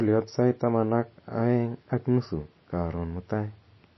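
MP3 compression runs through the whole of this short speech clip, from start to finish, and is the likely cause of the damage, which is plainly audible. Nothing is present above 5.8 kHz, where a starved encoder has cut the treble at a fixed point, and the thin, watery texture comes from weak frequency lines being dropped and switched on and off from frame to frame. That degree of loss fits a very low bitrate of around 24 kbps.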